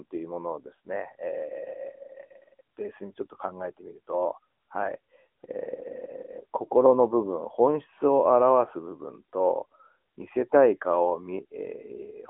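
Throughout the speech, the AMR narrowband mobile codec limits the audio to roughly 200 Hz to 3.4 kHz, with nothing above 3.7 kHz, and adds a plainly audible buzzy, synthetic texture from its pulse-driven vocal-tract model, fitting a mid-rate mode near 10.2 kbps. That texture distinguishes it from simple telephone-band filtering.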